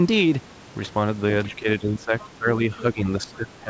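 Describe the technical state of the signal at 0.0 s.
At 0.0 s the speech is intact, with only the normal sound of a G.722 call path that carries nothing above 8 kHz.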